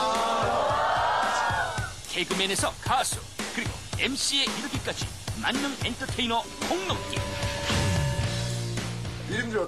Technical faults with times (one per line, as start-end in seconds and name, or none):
0.60 lost LE Audio frames
3.01 lost LE Audio frames
7.58 lost LE Audio frames